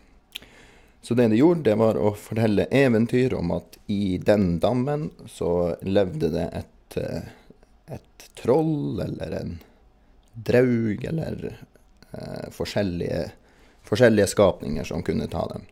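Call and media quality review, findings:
No call or media quality findings for this speech clip.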